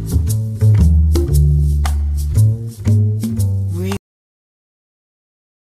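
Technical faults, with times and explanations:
3.97 s to the end, cut-off end: the sound stops abruptly mid-event and falls straight to digital silence, with no decay or room tail, and stays silent for the remaining 1.8 s. The final stretch of audio was never written or played out, so whatever was sounding is simply truncated. Unlike a dropout, nothing resumes after the gap, and unlike a fade-out, the level does not taper.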